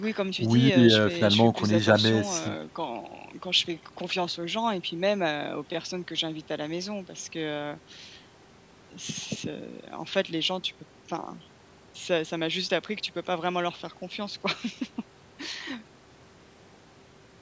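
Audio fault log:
The speech has passed through a call's microphone processing, which trims away the deepest bass and leaves no content above 8 kHz, and no faults are present in the signal.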